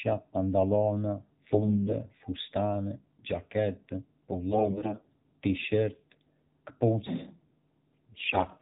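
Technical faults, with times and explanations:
Throughout: AMR narrowband mobile codec. The speech went through the 2G/3G mobile speech coder at one of its lower modes; the plainly audible damage fits a rate around 7.4 kbps. The audio was sampled at 8 kHz, so nothing above 4 kHz survives and the sound is dull and boxy. Each 20 ms frame rebuilds the voice from a vocal-tract model driven by only a few pulses, and at this bit budget that sparse excitation leaves a buzzy, synthetic edge on the speech.
1.52–2.06 s, 4.50–5.07 s and 8.12–8.46 s: AMR bit errors. On a weak link, the less protected bits of the coded frames arrived flipped while the checksum on the critical bits still passed, so the decoder used the corrupt frames instead of concealing them. Pitch and level hold roughly steady, but misplaced excitation pulses and wrong fine gain and spectral values make the speech hoarse, scratchy and gargly. 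The flipped-bit share climbs across the three bursts, from about 7% to 10% to 15%.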